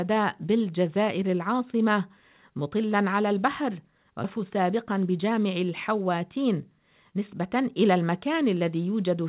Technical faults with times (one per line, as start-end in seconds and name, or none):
4.24-4.37 skip ahead
4.90-5.32 jitter buffer speed-up